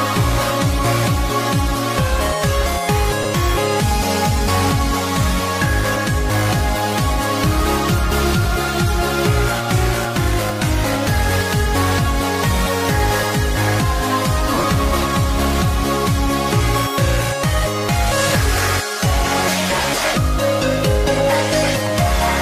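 Brief noisy smears replace the sound at 3.23–3.25 s, 8.43–8.45 s and 19.82–19.84 s, each lasting 20 ms, which fits two lost 10 ms frames. A longer broken patch runs from 14.54 to 14.64 s: 80 ms of gaps scattered over 100 ms, the longest stretch around 40 ms. These are lost LE Audio frames. Each time, the LC3 decoder filled the gap by repeating the last spectrum with randomised signs, which turns tonal content into noise.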